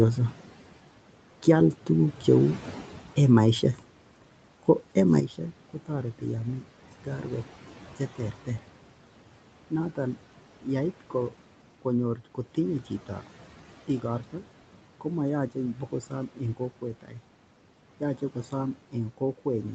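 A sudden gain jump comes in at 5.20 s and holds until the end of the clip. The level steps down by about 9 dB from one sample to the next, with no fade. The speech and the room noise underneath it drop together, which is why it sounds like a fader slammed down. The likely cause is a digital gain setting or bit shift applied without a ramp.

Speech cut by the noise suppressor happens three times: at 7.99–8.48 s, 15.74–15.93 s and 17.02–17.16 s. In each, the suppressor mistakes a soft part of the speech for background. It pulls that part down along with the noise, by about 11 dB, about 8 dB and about 11 dB respectively. Each dip swallows roughly a tenth of a second of speech, leaving those moments faint and swallowed.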